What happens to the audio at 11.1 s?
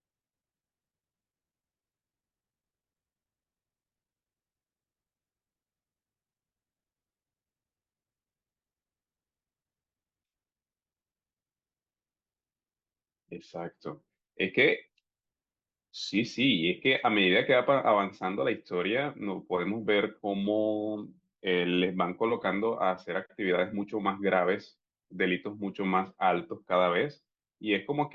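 Nothing goes wrong at 11.1 s; the speech there plays through intact, with no dropout, click, distortion or other fault.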